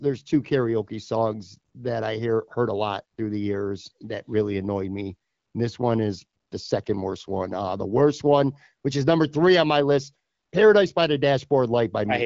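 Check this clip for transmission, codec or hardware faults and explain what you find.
Nothing here points to a fault: the speech comes through a wideband HD Voice path, the AMR-WB codec at a rate that fits its higher modes around 16 kbit/s, with the band topping out near 7.6 kHz as that link would have it.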